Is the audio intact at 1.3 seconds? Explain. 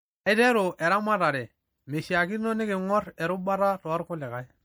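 No, not really. At 1.3 s the speech carries the same damage it has from start to finish: a watery, swirly texture, and a smeared, chirpy edge on s sounds. That's likely MP3 compression, and the amount of damage fits a fairly low bitrate around 64 kbps. When bits run short like that, the encoder drops quieter frequency detail, which flickers in and out from frame to frame.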